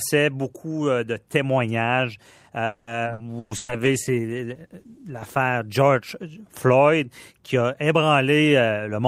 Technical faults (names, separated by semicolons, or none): call audio freeze; skip ahead; burst of packet loss; call bitrate drop; jitter buffer slow-down; jitter buffer speed-up